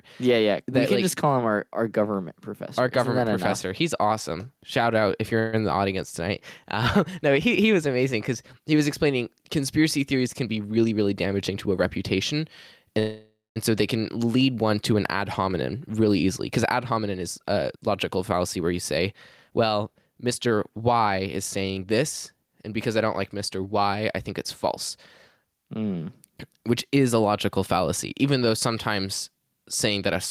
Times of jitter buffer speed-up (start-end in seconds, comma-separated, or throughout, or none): 10.44-11.75, 15.73-18.73, 19.13-21.85